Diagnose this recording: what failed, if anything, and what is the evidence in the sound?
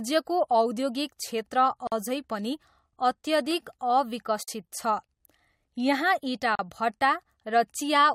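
The speech drops out three times: about 46 ms at 1.87 to 1.92 s, 48 ms at 4.43 to 4.48 s, and 38 ms at 6.55 to 6.59 s. Each one cuts out with its edges smeared by the codec, and then picks up right where it left off. That's a gap at a join of encoded pieces, a codec-stage problem. The segments were encoded separately and butted together, so each one's encoder start-up delay and last-frame padding got left in as silence.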